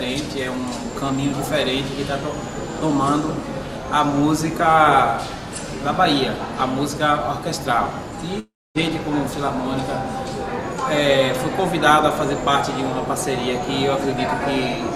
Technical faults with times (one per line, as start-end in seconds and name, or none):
8.39-8.78 long network dropout